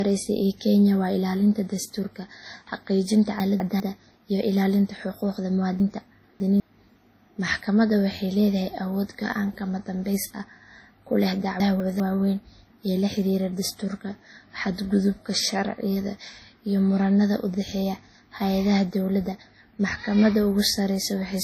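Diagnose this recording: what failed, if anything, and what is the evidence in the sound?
Throughout the speech there is a layered smearing with a dull top end and nothing above 16.4 kHz. At the codec stage this points to transcoding between lossy codecs, likely WMA at 32 kbit/s re-encoded to AAC-LC at 48 kbit/s, each encoder's artefacts stacking.

At 3.4 to 3.8 s, after "dastuurka xaqiijinta", at 5.8 to 6.6 s, after "iyo ilaalinta xuquuqda", and at 11.6 to 12.0 s, before "waaweyn ee la xiriira", the speech jumbles. These are chunks out of order in the buffer or storage stage. 200 ms blocks play one or three positions late, leaving hard joins.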